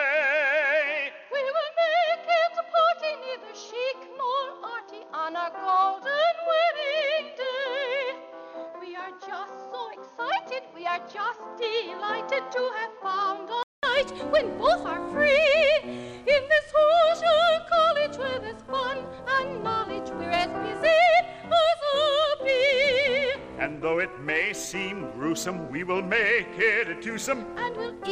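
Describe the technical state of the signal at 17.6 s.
At 17.6 s the signal is intact, with no dropout, clipping, glitch or other technical fault at that moment.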